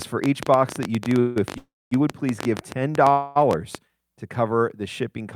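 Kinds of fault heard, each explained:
Train of clicks: Most likely electrical interference or a faulty connection or power supply kept injecting a short pulse into the signal. From about 0.02 s to 3.76 s, around forty near-identical clicks arrive at an uneven pace of about 11.7 per second, peaking about 15 dB above the speech. The result is a ragged ticking laid over the talker that continues through the pauses.
Call audio freeze: Packets were likely held up in transit, so the receiver's jitter buffer ran dry and had to fill the wait with a decaying continuation of the last sound. This happens three times, at 1.19 s for 164 ms, at 1.58 s for 335 ms and at 3.11 s for 242 ms. The second fill fades to about 230 ms of silence. Each time the speech resumes where it left off, so nothing is lost but the timing is stretched.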